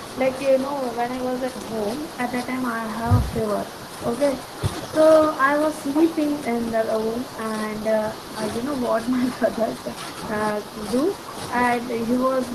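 No technical faults can be heard anywhere in the recording.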